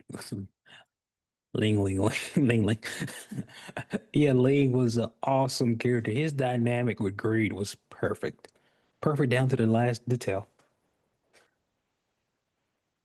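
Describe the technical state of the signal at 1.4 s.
At 1.4 s the signal is intact, with no fault to be heard at that moment.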